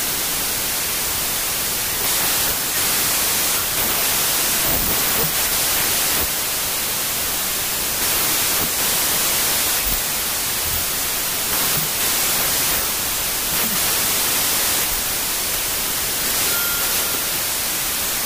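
From start to finish, packed 24-bit samples are being read as 16-bit integers, a wrong sample width. Each three-byte value is split across two-byte reads, so most of the resulting samples are assembled from mismatched bytes, and only some still carry the top bits of the real waveform. The result is loud noise with the original buried inside it. Because the data yield more samples than intended, everything plays at 0.667 times normal speed, slowed and pitched down.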